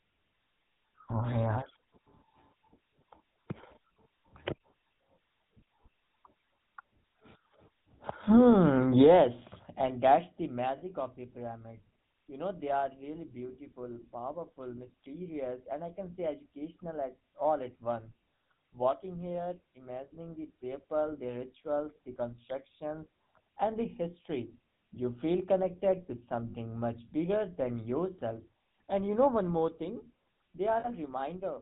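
GSM full-rate codec damage runs through this whole speech clip: the sound is band-limited to below 4 kHz and carries a buzzy, gravelly roughness from the pulse-driven vocal-tract model, which fits the 13 kbps GSM full-rate coder audibly degrading the signal. Lost GSM frames occur at 10.78–10.83 s (between "yes and that's the" and "of the pyramid"), 26.50–26.54 s (between "you feel connected to" and "much bigger than yourself") and 30.80–30.89 s, where the decoder repeats the last good frame, leaving a brief rough, metallic ring that fits a couple of missing 20 ms frames.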